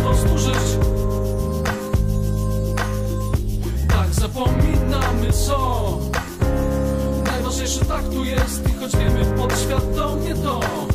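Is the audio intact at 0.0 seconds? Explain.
Yes, the audio is intact at 0.0 seconds, with no fault at that moment.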